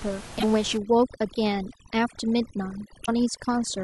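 Damaged data in the compressed stream hits from 0.35 to 0.44 s and again from 3.02 to 3.09 s: corrupted frames throw the decoder out of sync, so each spot becomes a short glitch while it hunts for the next valid frame header. Overdone noise removal runs from 0.77 s to the end. The reduction was set so hard that bands near its noise estimate are pulled down to nothing. The room noise, about 17 dB below the speech, is squeezed into near silence dotted with twinkling specks.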